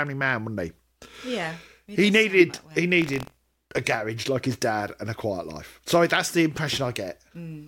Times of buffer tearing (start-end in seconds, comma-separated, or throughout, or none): 3.00-3.80